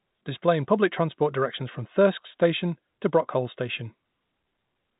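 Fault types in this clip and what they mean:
No faults to report; the speech sits in the usual telephone band of G.711 coding, with nothing above about 3.8 kHz.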